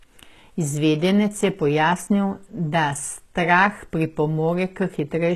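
Speech clip with plainly audible HE-AAC compression damage all the way through: the treble sounds bright but synthetic, s sounds go gritty and lispy, and nothing reaches above 12.3 kHz. That's likely spectral band replication at a low bitrate, around 16 kbps.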